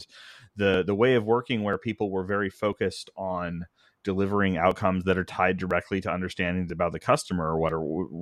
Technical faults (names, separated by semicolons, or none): audio missing between chunks